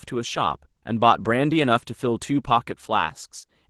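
Nothing stood out on listening to this speech recording as it comes across the call path.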